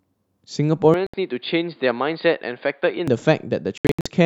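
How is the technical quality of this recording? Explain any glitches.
The recording has two distinct problems: a stretch captured through a weaker input, and gaps in the playback.

From 0.94 to 3.08 s, the system likely switched its input to a poorer device. That device cuts everything above 4.8 kHz, so the speech turns dull and boxy, drops a little in level, and picks up a faint new noise floor. There's no silence at either switch.

At 1.07 s, a Bluetooth dropout likely left packets arriving too late for the headphones, which discarded them. The result is a clean 70 ms hole, consistent with about three lost packets, after which the speech picks up further along, as though it had kept playing.

From 3.78 to 4.06 s, a second likely Bluetooth dropout chops the speech into several short holes totalling 209 ms across about 279 ms. The longest single gap is 70 ms, giving a stuttering, broken texture.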